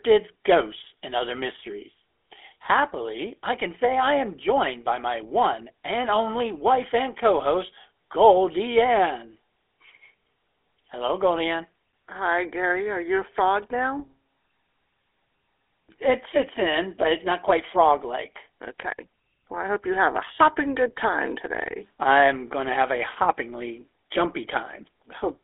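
Throughout, GSM full-rate codec damage is plainly audible: buzzy, gravelly speech from pulse-driven coding, nothing above 3.8 kHz, fitting a 13 kbps stream.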